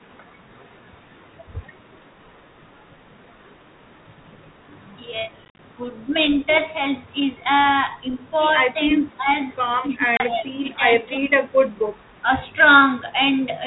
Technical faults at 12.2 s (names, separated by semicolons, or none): speech suppressed in double talk